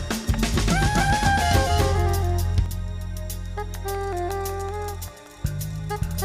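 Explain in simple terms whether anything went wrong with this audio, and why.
Yes, something went wrong. From the very start until 2.66 s, the sound plays twice, with a second copy about as loud as the first trailing roughly 0.3 seconds behind. This is a doubled audio track, likely from the same sound being recorded a second time through a slower route. Unlike a room echo, the copy doesn't fade or sound roomy, and at 2.66 s it cuts off abruptly.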